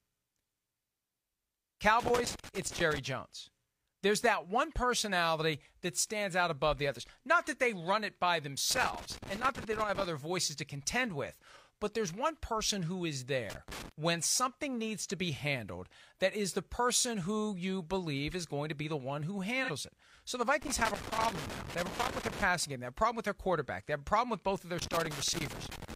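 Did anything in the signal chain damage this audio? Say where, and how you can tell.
Yes. Loose connector crackle in the analogue wiring: irregular bursts of crackle and scratching at 2.0–2.99 s, 8.70–10.06 s, 13.50–13.92 s, 20.62–22.42 s and 24.79–25.94 s. A worn or dirty contact is making and breaking, chopping the speech and popping wherever DC sits on the line.

AAC frame loss with concealment at the codec or network stage: a brief smeared, noisy patch at 19.64–19.70 s. About 43 ms of signal was lost, which fits a single missing frame. The decoder patched the gap by re-synthesising from the previous good spectrum.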